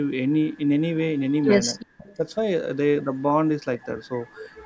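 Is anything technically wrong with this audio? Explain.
Yes. The most likely cause is a far end playing the call over a loudspeaker, where the echo canceller failed to remove all of what its microphone picked up, so part of the talker's own speech was sent back. That is an echo leak: a faint copy of the speech, delayed by 377 ms, at 1.17–1.46 s, 1.74–2.16 s, 3.81–3.86 s, 4.29–4.35 s and 4.52–4.65 s. It sits roughly 20 to 40 dB under the speech, loudest in the 1.74 s stretch.

The second fault is speech suppressed in double talk. With the echo present at the same time as the talker, the canceller likely could not tell the talker from the loudspeaker return and turned both down. Right after the longest echo stretch, from 2.17 to 2.27 s, the speech dips by only a few dB for about a tenth of a second. The drop is brief and shallow, a slight sag rather than a dropout.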